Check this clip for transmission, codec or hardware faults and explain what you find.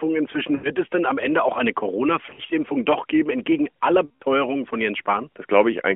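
One fault recurs in this speech clip: lost AMR speech frames, heard three times over a narrowband line of about 250 Hz to 3.4 kHz whose light codec colouring fits AMR-NB's 12.2 kbps mode.

Lost AMR speech frames occur at 0.56–0.70 s, just before "es denn am" (about 80 ms lost); at 2.26–2.52 s, between "auch eine" and "doch geben entgegen aller" (about 120 ms, scattered over 240 ms in runs no longer than 40 ms); and at 4.06–4.23 s, after "doch geben entgegen aller" (about 140 ms). Corrupted frames fail their checksum, so the decoder repeats the last good pitch and vocal-tract settings at falling gain. The sound smears into a stretched, fading tone, warbling at 2.26 s, then returns rough. That concealed sustain, rather than a hard silent gap or click, separates it from a plain dropout.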